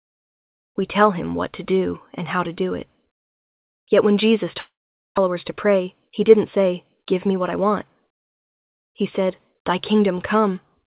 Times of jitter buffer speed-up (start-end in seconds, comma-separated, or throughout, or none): 5.27-7.57